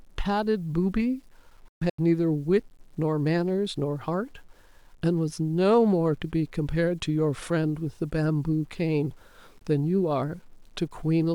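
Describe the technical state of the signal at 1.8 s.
At 1.8 s the speech falls inside a Bluetooth dropout running from 1.68 to 1.99 s. Within that stretch about 213 ms of audio is missing, broken into several silent holes spread over roughly 300 ms, the longest lasting 128 ms. The pattern fits about ten packets failing to reach the headphones in time. When audio returns, the speech has moved on rather than resuming where it stopped. On a waveform the holes appear as flat silent gaps with abrupt edges. On a spectrogram they are blank vertical columns cutting across every frequency.

The same moment also carries low bit depth without dither, which affects the whole clip. The audio was most likely truncated to about 9 bits with no dither. That leaves a quantisation error around 40 dB below the signal, and because the error tracks the waveform, the speech sounds grainy and gritty, worst on quiet tails. 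On a waveform, quiet passages show visible stair-steps. On a spectrogram, the distortion appears as harmonic-like smearing that follows the speech instead of a smooth noise floor.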